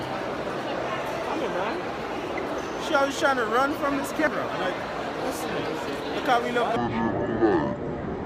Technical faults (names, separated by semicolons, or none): damaged data in a compressed stream; section at the wrong speed